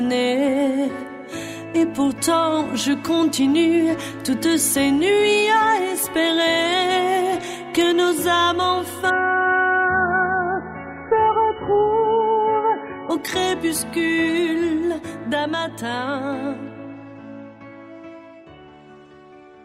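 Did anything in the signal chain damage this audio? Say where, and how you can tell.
Yes. The network stage damaged it. From 9.1 to 13.1 s the connection slowed and the adaptive stream switched to a lower bitrate. Quality drops abruptly and without a gap: everything above 3 kHz vanishes, leaving a dull, band-limited sound with coarse codec artefacts. At 13.1 s full bandwidth returns. The switch points to a fall from around 128 kbit/s MP3 to a severely starved encoding near 8 kbit/s, where the encoder must discard the treble entirely.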